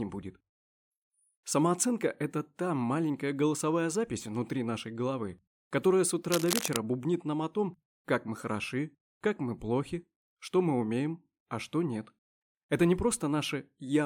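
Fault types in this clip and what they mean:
Cable scratch noise: from 6.30 to 6.76 s a dense, uneven burst of scratching and rustling sits over the sound, nearly as loud as the signal itself. The likely cause is a worn cable, connector or control being moved, its contact resistance changing rapidly.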